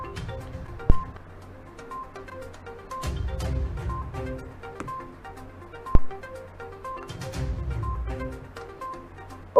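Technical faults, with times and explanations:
0.90–1.03 s and 5.95–6.15 s, phantom power thump: a supply switching on or off on a live input sends a voltage step through the coupling capacitors, giving a deep thump peaking at about -3 dBFS that dies away in 29 ms and 46 ms. Unlike a handling bump, it has no rustle or friction noise around it.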